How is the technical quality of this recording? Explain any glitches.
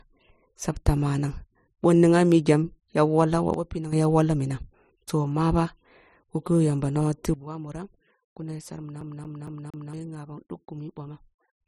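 The recording has two kinds of technical fault: abrupt level drops and a skipping-CD stutter.

Sudden gain jumps occur twice. From 3.54 to 3.93 s, just before "ya wolloh minoh toh", the sound falls about 10 dB at once. From 7.34 s, right after "yamba nonoh tigh", it drops about 12 dB and stays low to the end. The likely cause is digital gain applied without a ramp. Speech and background noise fall together, and the waveform shows a sharp step in its envelope.

A CD stuck on one turn runs from 9.01 to 9.93 s. A 231 ms stretch plays four times, each pass followed by a brief mute as the pickup jumps back, giving an even, rapid stutter. On a spectrogram it appears as identical blocks repeating side by side, separated by thin silent gaps.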